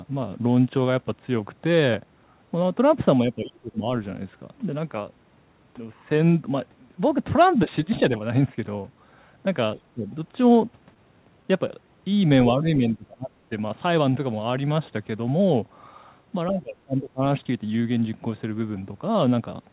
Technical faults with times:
3.22-3.89 speech suppressed in double talk
7.66-7.70 speech suppressed in double talk
9.94-10.07 speech suppressed in double talk
10.94-10.96 short concealed packet loss
11.68 short concealed packet loss
12.29 short concealed packet loss
12.52-13.31 speech suppressed in double talk
16.48-17.23 speech suppressed in double talk

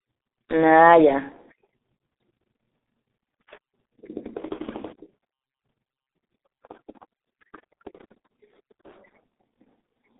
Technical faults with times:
0.00-10.20 G.723.1 codec

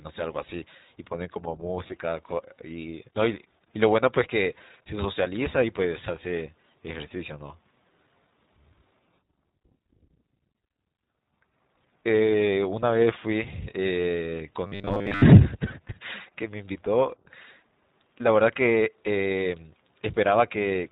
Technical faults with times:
0.00-20.92 iLBC codec
1.88-1.93 lost iLBC frames
14.67-15.23 robotic sound from repeated short buffers

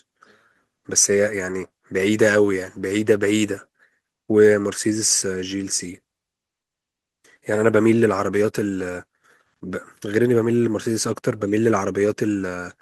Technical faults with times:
none

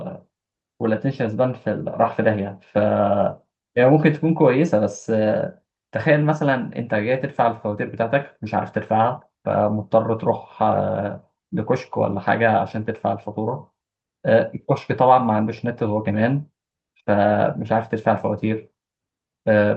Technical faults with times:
none

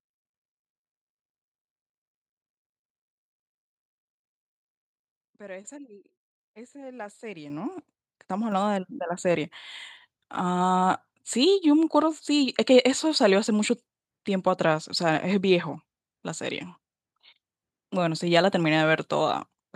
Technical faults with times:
7.50 microphone volume stepped up
8.52 microphone volume stepped up

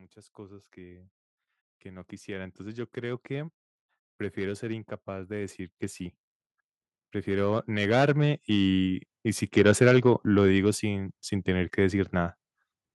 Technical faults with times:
1.82-3.60 automatic gain rising
7.24-8.89 automatic gain rising

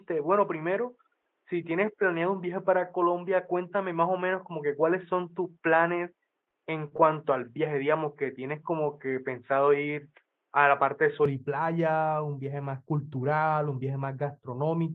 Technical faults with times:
0.00-11.25 input switched to a poorer device
6.45-6.49 short stall from a late packet
6.49-6.53 short concealed packet loss
6.89-6.96 short stall from a late packet

